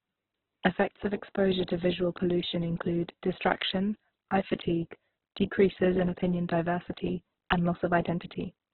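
Opus compression runs throughout: the speech has nothing above about 4.1 kHz and sounds heavily grainy, rough and noisy. This is likely Opus in its CELT mode at a rate fitting about 8 kbps, narrowing the bandwidth and filling starved bands with noise instead of detail.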